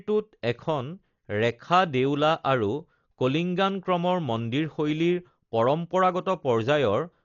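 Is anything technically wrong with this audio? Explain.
Yes. Throughout the speech, nothing reaches above 7 kHz, leaving it dull and muffled, and there is a rough, fluttering noise clinging to the voiced sounds. This is likely Dolby Digital compression at a very low rate, consistent with about 40 kbps. The encoder narrowed the band and left many frequency lines without mantissa bits, and the decoder filled those gaps with dither noise. That substituted noise, rather than a simple clean cutoff or watery swirling, sets it apart from plain low-pass filtering.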